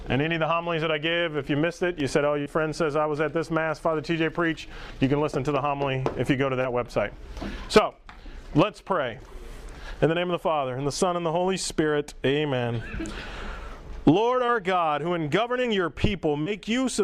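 Short concealed packet loss at 2.41, 5.32, 6.61, 14.46, 15.62 and 16.42 s: 20 to 40 ms gaps arrived too late, and the decoder bridged each by extending the preceding sound, leaving brief smears or wobbles.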